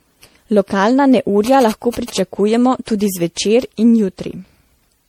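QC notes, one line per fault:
throughout, generation loss: The speech has a swirly, hollow quality with smeared consonant attacks, worse than a single 64 kbit/s MP3 pass would give. That points to the audio likely having gone through MP3 encoding around seven times, with each re-encode landing on a shifted frame grid and quantising again, so the noise and spectral holes stack up. Nothing above about 19.5 kHz survives.
1.46–2.19 s, GSM signalling bursts: A galloping dit-dit-dit of short buzzes cuts in over the speech, sitting at about 15 dB below the signal. The buzz repeats at 217 Hz, the classic frame rate of a 2G phone. Here the handset is sending signalling bursts, and something in the audio chain is rectifying that RF and turning it into audible buzzes.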